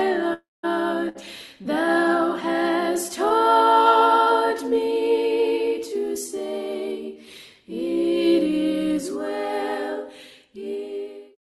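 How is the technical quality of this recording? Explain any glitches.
The recording has three network-related gaps early on, carried over a call path whose Opus coding cuts the top end at about 12 kHz, consistent with a bitrate around 32 kbps.

From 0.33 to 0.65 s there is a long network dropout. The sound before it carries on as a fading buzz or hiss for a fraction of a second, then falls to near-silence for roughly 0.19 s before the audio resumes further along. The likely cause is about 300 ms of audio that never arrived, with the receiver extending the last sound until it had nothing left to extend. On a spectrogram this shows as smeared, blurred harmonics thinning into an empty band. The waveform tapers to a flat line.

From 1.09 to 1.17 s there is a burst of packet loss. About 60 ms went missing, and the decoder bridged the hole by repeating the last sound while turning it down. It is heard as a brief held buzz or fading hiss before the audio picks up past the gap. 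A spectrogram shows frozen, decaying spectral lines across the gap. The waveform shows a shrinking, overly regular stretch.

From 3.29 to 3.32 s there is a short concealed packet loss. Roughly 20 ms failed to reach the decoder in time and was synthesized from the preceding sound, then blended back in. It registers as a tiny smear or wobble. On a spectrogram there is a narrow vertical seam with slightly smoothed detail. The waveform shows a small discontinuity.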